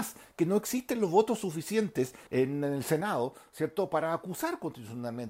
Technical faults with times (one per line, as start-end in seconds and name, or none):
3.01-5.30 sudden gain jump